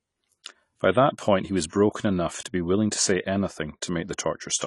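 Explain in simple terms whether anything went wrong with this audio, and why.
Likely AAC compression, throughout: the speech sounds dull and smeared, with nothing above 11.4 kHz, because the encoder threw away fine high-frequency detail to save space.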